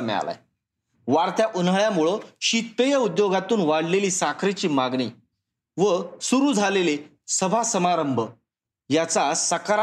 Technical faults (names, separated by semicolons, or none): none